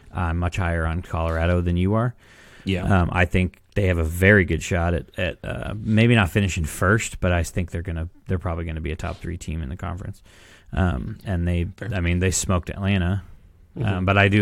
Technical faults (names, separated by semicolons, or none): none